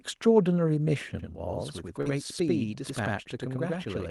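From 1.19 s to the end, the speech is doubled: every syllable is followed by a second copy at the same level, like a tight slap echo. This is channel delay (doubling). One channel arrives about 93 ms behind the other, and when the two are summed to mono the late copy is heard as a distinct repeat rather than blending in. A lag that size fits a 4096-sample buffer.

At 2.01 to 2.08 s there is a brief smear, a short wobbly stretch where the sound seems to hang instead of moving on. This is short concealed packet loss. About 40 ms of the stream never reached the decoder in time, and the receiver filled roughly 42 ms by extending the last sound it had before crossfading back into the real signal.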